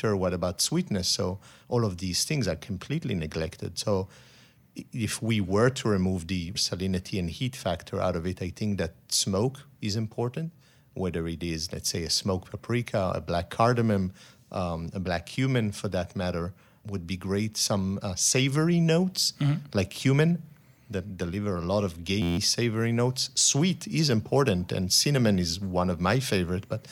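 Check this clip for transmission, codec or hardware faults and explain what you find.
One hardware fault shows up, a system hang loop from 22.22 to 22.37 s. The audio driver stalled while the sound device kept replaying the same ring buffer, so an 11.61 ms fragment, which fits a 512-sample buffer, repeats 13 times and replaces about 150 ms of speech. The speech gives way to a flat, steady buzz at 86.1 Hz. On a waveform the same short cycle repeats exactly; on a spectrogram the buzz forms evenly spaced horizontal lines at multiples of 86 Hz.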